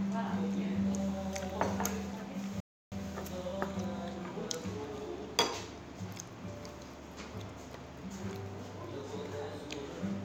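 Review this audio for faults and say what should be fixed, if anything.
A rebuffering stall runs from 2.60 s to 2.92 s. The player ran out of downloaded audio, fell silent, and then picked up at exactly the point where it stopped, adding 0.32 s to the running time. Unlike a dropout, where the gap swallows material and the sound jumps ahead on return, nothing here is missing. The sound is simply held up and then continues intact. A larger playback buffer, or adaptive bitrate switching that keeps downloads ahead of playback, would prevent it.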